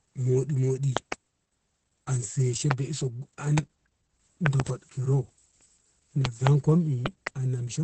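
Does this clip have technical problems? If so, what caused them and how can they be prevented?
Yes, two things. The speech has been through heavy Opus voice compression. There's nothing above about 8.4 kHz, and the SILK coder's coarse excitation leaves it muffled, hoarse and a bit robotic, which fits a bitrate around 10 kbps. Giving the encoder a higher bitrate would keep the full band and a cleaner voice.

There are also loud pops, peaking around 20 dB above the speech, which carries on underneath them. There are double pops at 0.97–1.14, 4.46–4.62, 6.25–6.49 and 7.06–7.29 s, and single ones at 2.71 and 3.58 s. They're likely voltage spikes from a loose plug, a switch, static or a driver glitch. Securing the cabling and updating the audio drivers should stop them.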